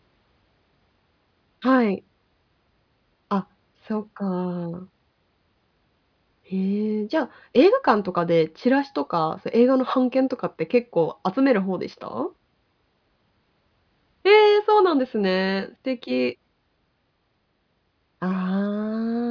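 No technical faults can be heard anywhere in this recording.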